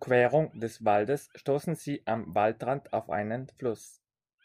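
No technical faults are audible.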